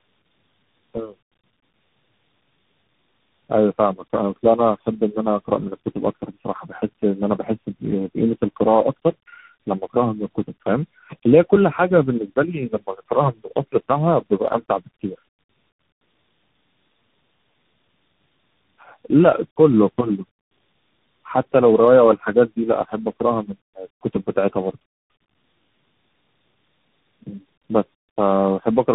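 Throughout, the speech suffers tandem speech coding. It passed through three speech codecs in a row, which points to AMR-NB twice and then CVSD, each re-coding the last one's damage. It sounds rough, muffled and warbly. A spectrogram shows nothing above 3.8 kHz and smeared, blotchy harmonics.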